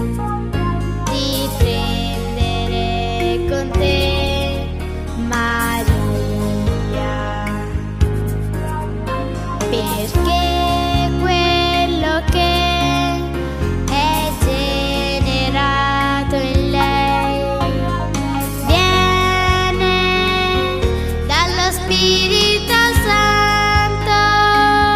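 The call's bandwidth estimate collapsed at 3.79 s, and the encoder was pushed to a far lower bitrate, a call bitrate drop that sounds like a fall from about 96 kbps to roughly 24 kbps. Starved of bits, the codec quantises the audio much more coarsely and trims away the upper frequencies, so the sound turns duller, rougher and watery. It stays degraded for almost six seconds before clarity returns at 9.71 s.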